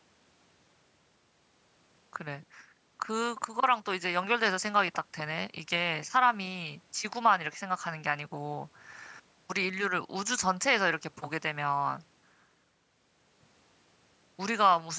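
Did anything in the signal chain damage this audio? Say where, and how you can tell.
No, nothing in the chain damaged this speech; it has simply passed through a call's microphone processing, which trims the deepest bass and leaves nothing above 8 kHz, and that's just how such a path normally sounds.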